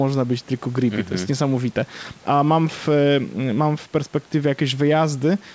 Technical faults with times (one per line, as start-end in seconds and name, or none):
none